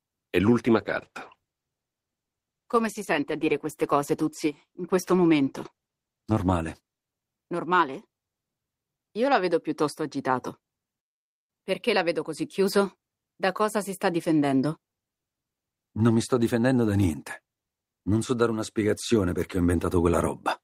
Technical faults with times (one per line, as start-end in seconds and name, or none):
0.67-7.61 call bitrate drop